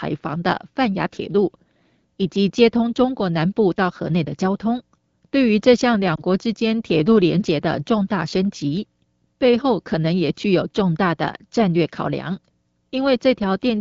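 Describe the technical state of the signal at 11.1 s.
At 11.1 s the speech is intact, carried by the AMR wideband (HD Voice) codec at 12.65 kbit/s, whose light coding leaves it clear.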